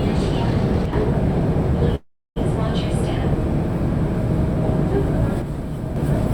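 From 0.86 to 0.93 s the sound abruptly falls by about 6 dB, likely because one channel drops out of the stereo pair before the mono sum. At 1.95 s the last sound stretches into a fading buzz, then roughly 0.3 s of silence, before resuming at 2.38 s with nothing lost but everything about 0.4 s later. This is likely a call audio freeze, where delayed packets left the jitter buffer empty. The same 6 dB drop returns from 5.42 to 5.96 s, likely another one-channel dropout.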